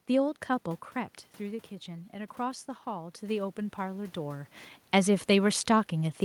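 From 0.94 s to 4.58 s the automatic gain rises by about 7 dB, compensating a roughly 9 dB input drop after the talker moved back around half a second in. Voice and room noise swell together; the waveform envelope and spectrogram noise floor climb steadily across that span.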